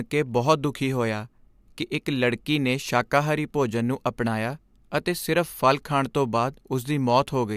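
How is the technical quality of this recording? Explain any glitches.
Nothing in the recording stands out as a glitch, so there's nothing to explain.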